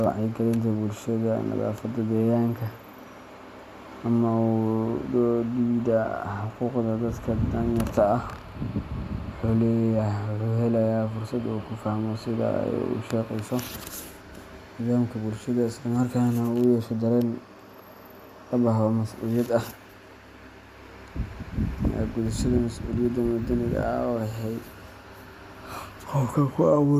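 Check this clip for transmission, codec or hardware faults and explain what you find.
No transmission, codec or hardware faults are audible anywhere in this speech recording.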